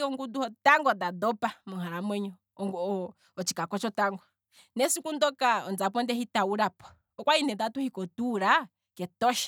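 No audible technical faults in this speech recording; nothing to flag.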